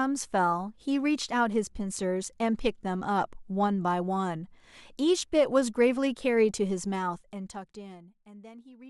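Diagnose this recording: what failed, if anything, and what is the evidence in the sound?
Zipper noise, from the driver or buffer stage, runs from 6.86 to 8.42 s as the speech level falls about 20 dB. The gain jumps in steps some 400 times a second with no smoothing, so a fine ticking rides the fade.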